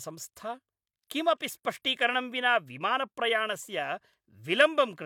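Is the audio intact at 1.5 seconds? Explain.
Yes, at 1.5 seconds the speech plays through intact, with no dropout, click, distortion or other fault audible at that moment.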